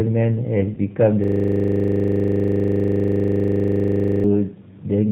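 From start to finish the speech carries plainly audible G.729 codec damage. The sound fits an 8 kbit/s G.729A stream. That codec rebuilds the voice from a vocal tract filter, a pitch predictor and a few pulses per frame. It keeps nothing above 4 kHz. The result is muffled and narrow. Voiced sounds turn slightly rough and synthetic. The speech stays intelligible but clearly processed.

At 0.75 to 0.79 s there is VoIP packet loss concealed by the speech codec. About 20 ms of audio went missing, which fits one lost packet. The decoder filled the gap from its last pitch and filter settings. It lowered the gain as it went. The gap is stretched into a fading, extrapolated sound. Because each frame builds on the one before, the voice stays weak or distorted for a moment after.

From 1.24 to 4.24 s a system hang loop takes over. The computer or driver froze, but the sound hardware kept replaying its ring buffer. 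A 40 ms slice of audio repeats exactly, roughly 75 times. That is a loop rate of 25 Hz. It sounds like a rapid stutter bordering on a buzz. About three seconds of the real audio is lost underneath it.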